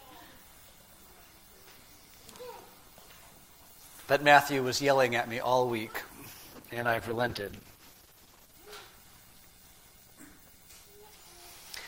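From 6.27 to 8.61 s a call bitrate drop makes the sound coarse, watery and dull, which fits the encoder falling from about 64 kbps to about 11 kbps. Unlike packet loss, there are no gaps or stutters, just steady roughness until full quality returns.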